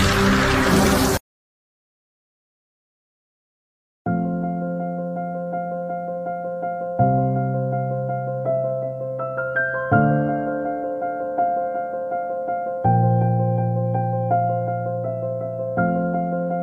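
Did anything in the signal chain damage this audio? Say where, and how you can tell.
No, nothing in the signal chain left any audible damage, and the signal stays intact and continuous at every stage.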